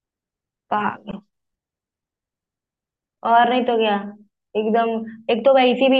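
No technical faults can be heard in the speech.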